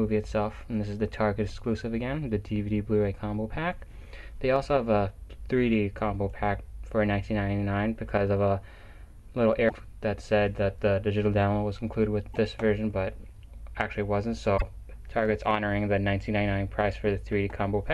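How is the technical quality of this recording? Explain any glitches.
The recording has three brief glitches from damaged data in a compressed stream. They occur at 9.65 to 9.72 s, 12.34 to 12.36 s and 14.54 to 14.62 s. Corrupted bytes make the decoder misread frames and lose sync. Each event sounds like a short chirp or blip.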